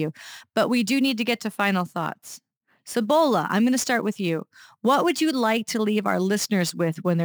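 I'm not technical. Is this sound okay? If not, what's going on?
No. Throughout the speech there is a hiss or grittiness riding on the voice. It gets rougher on louder and sharper sounds, such as hissy consonants, and disappears in the pauses. This is sample clock jitter. The timing clock inside the recording equipment wobbles by a few millionths of a second, so each moment of sound is captured slightly too early or too late. Fast-changing parts of the sound suffer most, which creates that roughness.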